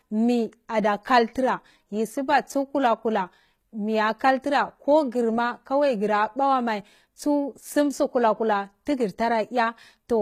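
It's a speech clip with plainly audible HE-AAC compression damage throughout: the treble sounds rebuilt rather than real, with gritty, metallic s sounds and nothing above 14.9 kHz. That's likely band replication standing in for the top end, which fits a low bitrate around 20 kbps.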